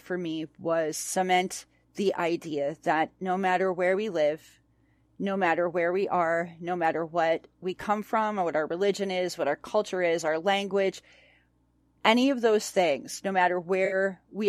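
At 13.85 to 13.95 s, just after "of those things no", AAC frame loss with concealment smears the sound into a brief noisy patch, showing as a blurred, flattened spectrogram strip.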